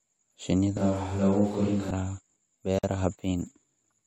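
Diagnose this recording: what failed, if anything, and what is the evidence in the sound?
Between 0.77 and 1.91 s the speech abruptly turns roomy and hollow, with thinner bass and a noise floor about 25 dB below the speech, though the level barely changes. This is likely a switch to a distant microphone at the capture stage. On a spectrogram, low frequencies thin, reverberant tails smear, and the noise floor rises, all with hard edges.

A gap at a join of encoded pieces appears at 2.79 s: a 48.5 ms silence cuts into continuous speech, which then resumes where it stopped. This is a codec-stage fault, where encoder start delay and last-frame padding were kept when separately encoded pieces were joined. The waveform shows a flat dropout, and the spectrogram shows a blank vertical stripe with slightly smeared edges.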